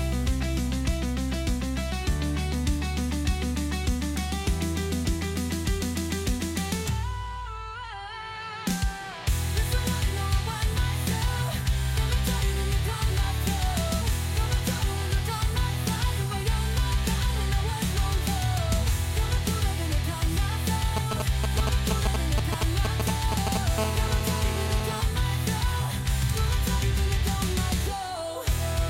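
From 20.97 to 23.57 s the audio carries GSM signalling bursts: a galloping dit-dit-dit of brief 217 Hz buzzes, roughly as loud as the sound itself. A nearby 2G phone exchanging short control transmissions is being rectified by the audio circuitry. From 23.78 to 25.01 s this becomes a steady GSM phone buzz, a hard, raspy 217 Hz tone with dense harmonics about 8 dB below the signal. This is a phone in a call, transmitting continuously at its 217 Hz burst rate.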